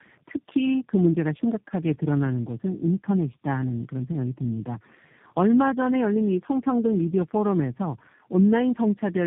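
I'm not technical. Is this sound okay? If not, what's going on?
No. Throughout the speech there is tandem speech coding: the call passed through about four separate phone-network voice compressors in a row, each re-squeezing the previous one's damage. That stacking makes it rough, muffled and warbly, with nothing above 3.7 kHz.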